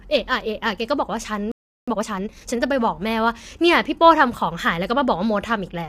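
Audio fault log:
Throughout: low-delay AAC compression. The speech sounds rough and grainy, with noise between harmonics and a thin top end, likely from AAC-ELD at roughly 32 kbps.
1.52 to 1.88 s: playback stall. The sound cuts out mid-flow for about 360 ms, likely because the player ran dry or its thread got blocked.
1.88 to 2.60 s: time-compressed catch-up. Right after the gap, speech rushes along at about 1.5 times normal speed, same pitch, as small cross-faded chunks get dropped.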